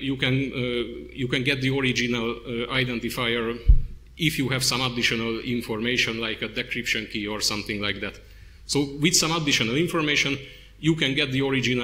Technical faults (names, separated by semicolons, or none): none